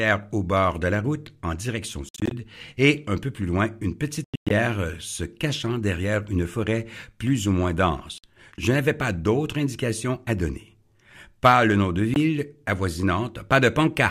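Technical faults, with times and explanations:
2.09–2.31 s, 4.24–4.51 s, 8.18–8.24 s and 12.14 s, Bluetooth dropout: the sound cuts to silence with abrupt or briefly faded edges. The first two are broken into short gaps, the longest about 112 ms. Each time it resumes further on, as though it had kept playing. Packets likely arrived too late and were discarded.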